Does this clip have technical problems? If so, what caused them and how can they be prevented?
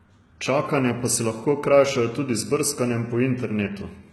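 Yes. Throughout the speech there is heavy damage consistent with HE-AAC compression, the likely cause, at a very low bitrate, which fits roughly 16 kbps. The s sounds come out gritty and lispy, with a metallic edge, because the treble is a copied, reshaped version of lower bands whose harmonics don't line up with the real ones. On a spectrogram the upper band looks like a smeared, blocky copy of the region below it, and nothing appears above 11.8 kHz. Encoding at a higher bitrate, or using plain AAC or Opus at adequate rates, would prevent it.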